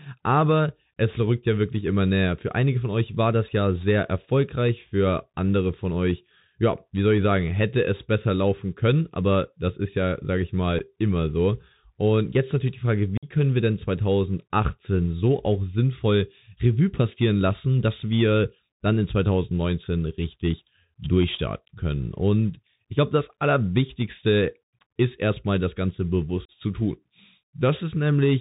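Throughout the 28 s of speech, the Bluetooth CVSD headset codec limits the band to below 4 kHz. Its one-bit delta stream cannot follow loud high sounds, so sibilants turn scratchy over a granular hiss. From 0 to 8.0 s, just before "besser laufen können aber", sample clock jitter of a couple of microseconds adds a hiss and roughness roughly 35 dB below the signal. It rises on loud, bright passages and is absent in pauses. Unconcealed Bluetooth headset packet loss leaves hard-edged silent holes. The first is a 7.5 ms gap at 10.79 s, between "ist ja sage ich" and "immer so", which fits a single lost packet. The second is a 52.5 ms dropout from 13.17 to 13.29 s, before "können wir denn". The third is a 37.5 ms dropout from 26.45 to 26.50 s. Each gap is followed by briefly quieter speech as the CVSD step size recovers.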